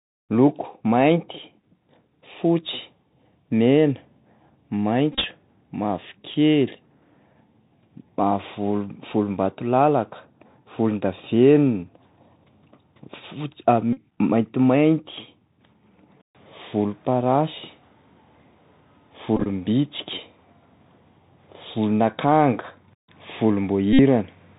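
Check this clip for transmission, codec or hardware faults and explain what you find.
Two problems here: the whole clip has been through a Bluetooth CVSD headset codec, and there are four bursts of Bluetooth headset packet repeats.

The CVSD codec is on from start to finish, and the damage is plainly audible. The sound fits 64 kbps CVSD, which encodes one up-or-down bit per sample with an adapting step. That caps the band at 4 kHz and leaves a grainy hiss under the speech.

Packet repeats land at 5.13 to 5.25 s, 13.93 to 14.00 s, 19.37 to 19.47 s and 23.93 to 24.00 s, with about 67.5, 41.2, 48.8 and 60 ms lost. Lost packets were replaced by replaying the previous one's bits, so each run becomes a steady buzz near 267 Hz. The first and third bursts are scattered, with runs of around 30 ms and 20 ms.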